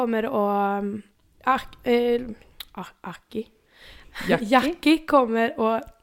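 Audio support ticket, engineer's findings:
No faults found on inspection.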